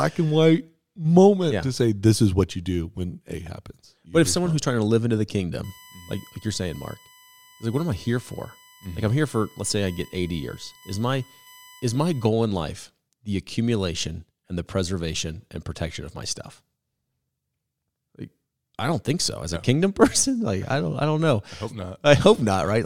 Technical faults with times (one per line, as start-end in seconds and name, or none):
5.64-12.29 USB whine